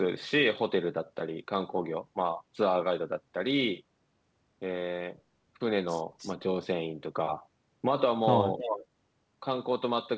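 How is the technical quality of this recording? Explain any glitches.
The recording has two short echo leaks, heard through a call path that carries nothing above 8 kHz, which fits G.722 wideband coding.

At 6.18 to 6.33 s and again at 8.59 to 8.86 s, a delayed copy of the speech returns. The delay is about 0.31 s and then 0.32 s. The first echo is faint, roughly 20 dB under the voice. The second is much stronger. The likely cause is a loudspeaker on the far end whose echo canceller let some microphone pickup slip back into the call.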